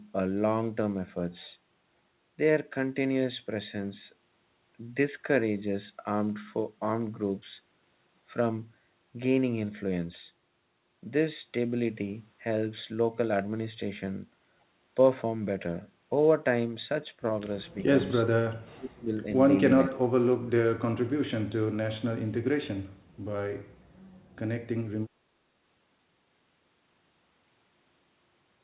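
At 18.76 to 19.26 s and again at 19.86 to 20.1 s, the speech drops sharply, roughly 30 dB at its deepest. This is speech suppressed in double talk. The echo canceller likely mistook the talker for echo while both sides spoke. The sound has nothing above 4 kHz, which fits a narrowband call codec.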